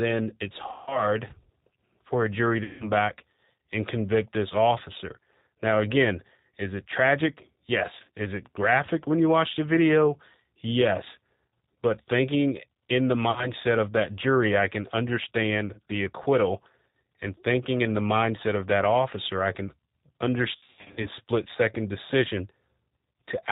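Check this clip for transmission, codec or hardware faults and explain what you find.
Yes, there are two problems: the whole recording has gone through a G.729 codec, and there are five bursts of VoIP packet loss concealed by the speech codec.

G.729 codec: It's there from start to finish, and the damage is easy to hear. At 8 kbit/s the codec rebuilds each 10 ms frame from a vocal-tract filter, a pitch predictor and a few pulses, so everything above 4 kHz is gone. The speech comes out muffled and slightly rough, with a synthetic edge on every syllable.

VoIP packet loss concealed by the speech codec: The gaps fall at 0.72–1.08 s (150 ms missing) and 2.64–2.92 s (160 ms). Then 7.96–8.10 s, just after "again is it tragic", loses 90 ms scattered over 160 ms. At 13.31–13.50 s, between "thinking in the" and "of that jury I", 50 ms is missing. Finally 20.56–21.08 s, right before "split second decision", loses 350 ms across 480 ms, with runs up to 80 ms. 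In each gap the decoder stretches its last pitch and filter state and turns the gain down, so the sound smears into a fading buzz. It stays weak for a moment after real packets resume, and the last burst is the most broken-up.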